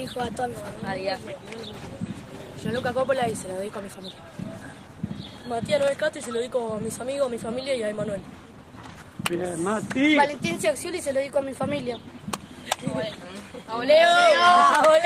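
No technical faults are audible.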